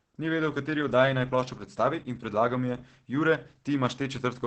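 Speech coded throughout with Opus voice compression in its SILK linear-prediction mode at a very low bitrate, around 10 kbps by the sound of it, with a coarsely coded excitation. The band stops near 8 kHz, pointing to wideband operation, and the voice comes out muffled, hoarse and slightly robotic.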